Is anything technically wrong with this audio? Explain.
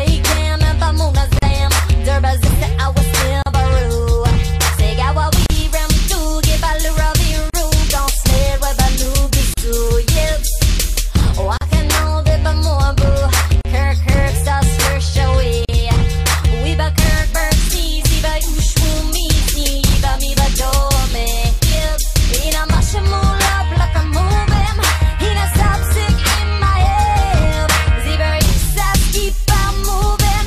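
Yes. Gaps at a join of encoded pieces occur at 1.39, 3.42, 5.46, 7.50, 9.54, 11.57, 13.61 and 15.65 s. Each is a 38 ms gap with smeared edges, roughly every 2 s, left by untrimmed encoder padding.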